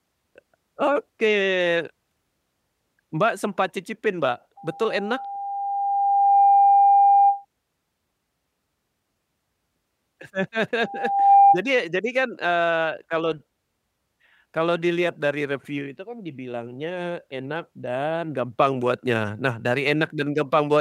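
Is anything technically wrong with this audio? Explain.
Yes. Loudspeaker feedback squeal occurs from 4.57 to 7.45 s and from 10.80 to 11.60 s, before "jadi kan". The microphone hears its own loudspeaker, and at 800 Hz the loop gain passes one. That tone swells, first over about two seconds, then half a second, to roughly 10 dB above the speech.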